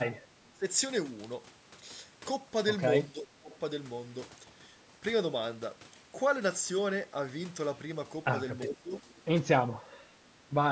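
When both ends of the call were likely talking at once, the echo canceller apparently could not tell this talker from the loudspeaker echo and turned the outgoing speech down, so the speech is suppressed in double talk. The speech briefly dips at 0.30 to 0.35 s, then drops much harder, by around 25 dB, from 0.51 to 0.65 s. Longer dips of roughly 15 dB follow from 3.07 to 3.51 s and from 8.63 to 9.05 s, each leaving the speech quieter for a moment.

Overlapping the end of that last dip, from 8.99 to 9.22 s, there is an echo leak: the far end's echo canceller likely did not fully remove what its microphone picked up from its loudspeaker, and the leftover was sent back. It is a very faint copy of the speech, trailing it by 365 ms, within audio that, as usual for call processing, carries nothing above 8 kHz. A final short suppression dip follows at 9.84 to 9.94 s.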